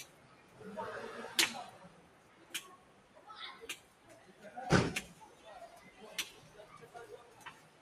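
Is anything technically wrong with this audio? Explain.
Yes. A noise suppressor made for speech was left on through the whole clip of sounds. It treats steady tones and ambience as noise, so its gain swings by roughly 15 dB. Attacks pass, held sounds sink, and the result pumps and thins.

The noise suppressor cut sound at 0.08–0.57 s, 1.89–2.48 s, 2.77–3.21 s, 3.82–4.08 s and from 7.64 s to the end. Each time it pulled the sound down by about 5 dB. The sound dips.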